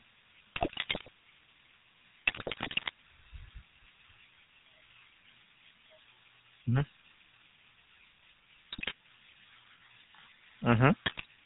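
GSM full-rate codec, throughout: the speech is squeezed through a vocal-tract model excited by a sparse, evenly spaced pulse train, consistent with the 13 kbps full-rate coder. Nothing survives above 4 kHz, and the voice carries a plainly audible buzzy, gravelly roughness.

GSM bit errors, at 0.56 to 1.09 s, 2.26 to 2.91 s, 8.72 to 8.93 s and 11.06 to 11.26 s: corrupted bits reach the decoder and scramble its filter, pitch and gain values frame by frame, so the voice breaks into squawks, pops and gargling in those stretches.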